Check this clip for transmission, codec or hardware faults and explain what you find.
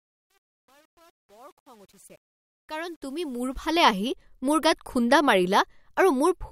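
One fault appears, on the opening fade-in. From 0.0 to 3.91 s, before "মোৰ গাত খুণ্ডা", truncation distortion on a fade makes the speech gritty, worst until 3.19 s. Undithered rounding, which fits a 9-bit gain stage, steps the waveform squarely, with broadband grit showing on the spectrogram.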